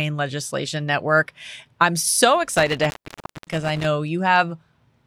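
A speech clip with an intermittent contact fault between 2.52 and 3.85 s. Within that span the signal path opens and closes as a loose cable or plug loses and regains its connection. The line is open for about 0.57 s in total. During those gaps the speech drops out or breaks up. Crackle marks the edges where the contact makes and breaks. Faint hiss from the open line remains.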